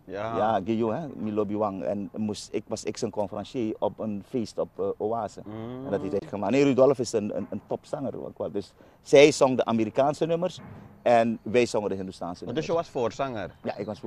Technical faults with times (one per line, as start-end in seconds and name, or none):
6.19-6.22 digital broadcast dropout